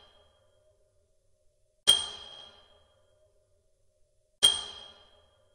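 At 2.32–2.45 s, repeated frames replay a 64 ms block twice more, adding 128 ms. It sounds like a stutter, with identical waveform segments side by side.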